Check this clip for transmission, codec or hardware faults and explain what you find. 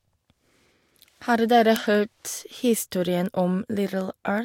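Word clock ticks run through the speech from 0.27 to 4.38 s: sharp, uneven ticks about every fifth of a second, as unlocked clocks drifting roughly 100 ppm apart drop or repeat single samples.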